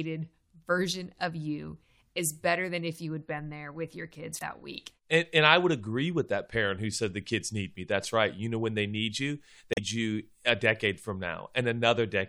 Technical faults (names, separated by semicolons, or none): damaged data in a compressed stream